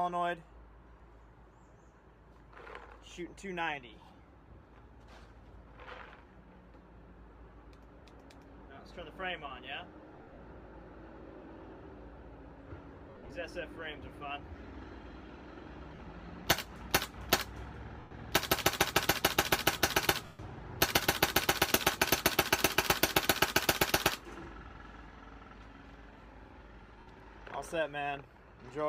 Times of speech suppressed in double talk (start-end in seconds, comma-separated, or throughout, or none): none